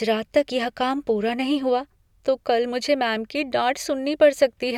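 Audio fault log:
No faults heard anywhere in this speech recording.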